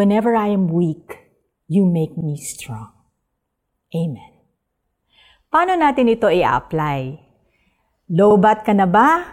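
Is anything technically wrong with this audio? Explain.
Yes, there are overlapping chunks at 2.21, 5.26 and 8.31 s, right after "am weak you make" at the first. Every 3 s a chunk restarts 50 ms early, replaying that sliver as a stutter rather than a dropout's gap.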